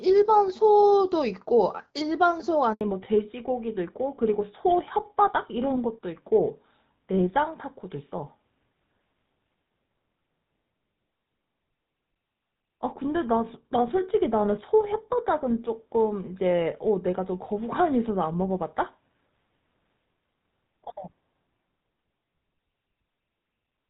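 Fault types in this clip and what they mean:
handover gap: From 2.73 to 2.81 s the speech drops out for 80 ms while the call switches networks and no frames arrive.
fallback to narrowband: From 2.81 s nothing above 4 kHz survives, and the speech turns duller and rougher, consistent with HD Voice giving way to GSM full rate.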